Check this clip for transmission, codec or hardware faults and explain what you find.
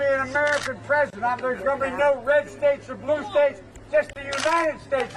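Two short dropouts at joins, at 1.10 to 1.13 s and 4.13 to 4.16 s. Each is a gap at a join of encoded pieces: separately encoded sections were butted together untrimmed, so encoder delay and end padding leave a gap of about 27 ms with smeared edges before the sound resumes where it stopped.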